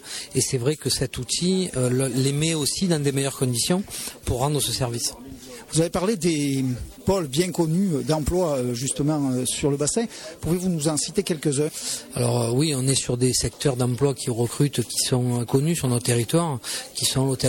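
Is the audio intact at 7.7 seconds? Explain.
Yes, at 7.7 seconds the audio plays through cleanly, with no dropout, click, distortion or other fault at that point.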